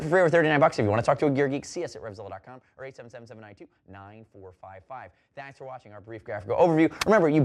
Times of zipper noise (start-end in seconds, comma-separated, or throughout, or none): 1.28-2.56, 6.02-6.66